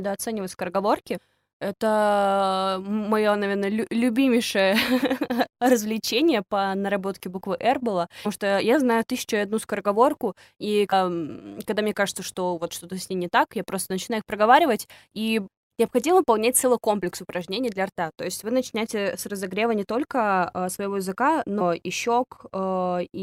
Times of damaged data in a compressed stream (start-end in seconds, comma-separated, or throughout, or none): 1.16, 5.02, 8.24, 10.92, 21.60